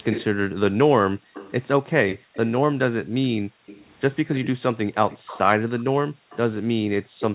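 Speech clip, and there's a faint second copy of the voice trailing the original by about 181 ms, at 0.04–0.24 s, 1.34–2.37 s, 3.66–5.39 s and 6.3 s to the end. It's an echo leak, likely from a far-end loudspeaker the echo canceller didn't fully cancel. It's quiet, roughly 10 to 20 dB under the speech. The background also gets gated by the echo canceller, ducking by about 40 dB in spots between 1.15–2.34 s, 3.42–3.66 s and 6.04–7.2 s as the canceller clamps the mic. The band tops out at 4 kHz, which fits a narrowband G.711-style call codec.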